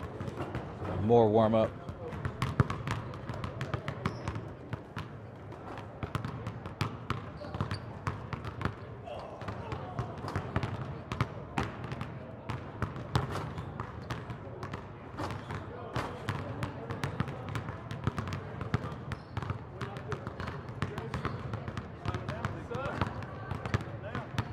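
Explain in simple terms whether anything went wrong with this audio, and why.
Nothing went wrong here, as far as the ear can tell, since the sound carries on steadily without any slips, gaps or odd changes along the way.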